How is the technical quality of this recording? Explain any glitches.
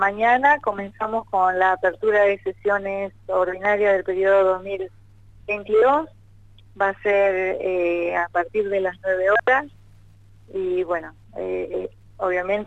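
A single glitch stands out: a loud pop from 3.65 to 3.67 s. A sudden voltage step, likely from a plug, switch or static discharge, lands on the signal as one sharp pop roughly 10 dB above the surrounding level, with the sound continuing underneath. On a waveform it shows as a lone tall spike; on a spectrogram, a thin vertical broadband stripe.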